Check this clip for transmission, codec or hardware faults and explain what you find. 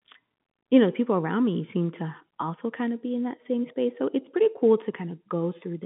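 I found no transmission, codec or hardware faults in this speech clip.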